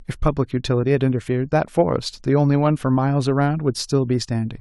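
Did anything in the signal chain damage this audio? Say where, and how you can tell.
No, nothing along the chain, from capture through to playback, has left an audible mark on this speech.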